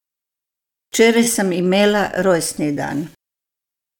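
Nothing stood out as a technical problem anywhere in the speech on listening.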